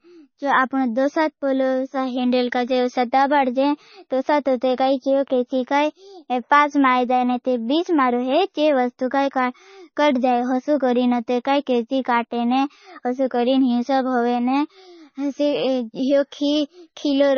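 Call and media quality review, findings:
Speech band-limited and watery for the whole clip; likely MP3 compression. Hard ceiling at 6.6 kHz, nothing above. Starved bit budget, fitting roughly 26 kbps, zeroes weak lines, giving swirly sibilants and smeared onsets. Spectrogram: flat cut plus flickering holes between frames.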